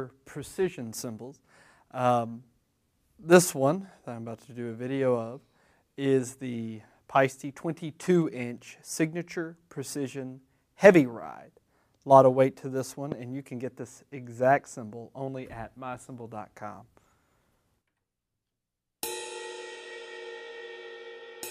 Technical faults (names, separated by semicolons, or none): loud pop